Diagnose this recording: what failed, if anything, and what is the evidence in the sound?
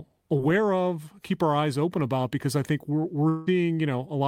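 Network: likely a long network dropout at 3.29–3.49 s, after "because I think we're"; concealment buzz fills the lost audio, showing as smeared, fading harmonics.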